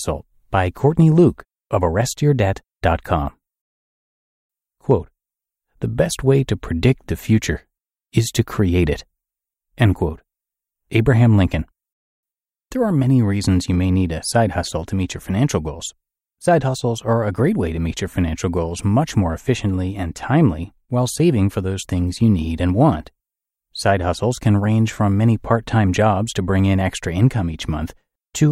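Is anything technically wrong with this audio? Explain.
No, nothing technically wrong turns up anywhere in this speech recording.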